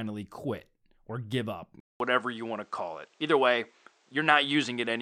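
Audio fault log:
1.80–5.01 s, input switched to a poorer device: Just after "quit or give up", a 200 ms silence falls, then the sound turns duller. Nothing remains above 9.1 kHz. Level shifts by around 5 dB, with new faint background noise. Another microphone likely took over.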